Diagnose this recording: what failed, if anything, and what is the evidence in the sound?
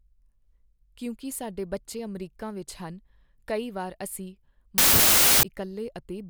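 A wrong sample width fault at the sample-format conversion stage hits 4.78 to 5.43 s. Packed 24-bit data read as 32-bit integers scrambles the bytes, so loud noise buries the speech, which runs about 1.33 times too fast and too high in pitch.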